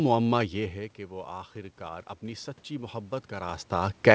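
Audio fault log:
0.51 to 4.14 s, automatic gain rising: after the input dropped about 14 dB, the gain control slowly raised its gain, so voice and room noise swell together.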